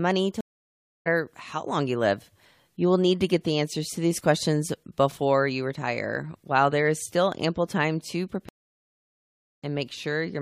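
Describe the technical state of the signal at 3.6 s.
The speech at 3.6 s plays through intact, with no audible fault at that moment.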